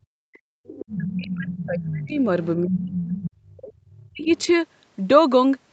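Speech clip with two tangled problems. There's speech suppressed in double talk from 0.07 to 2.24 s, 2.63 to 3.76 s and briefly at 4.12 to 4.33 s: the talker dips hard, by up to about 40 dB, likely because the echo canceller couldn't tell them from the far end and ducked everything. Meanwhile the other side's voice leaks through at 0.66 to 1.12 s, 1.39 to 2.16 s, 2.95 to 3.18 s and 3.92 to 4.52 s. It's fairly audible early on, faint by the last stretch, and likely residual loudspeaker echo the canceller didn't fully remove.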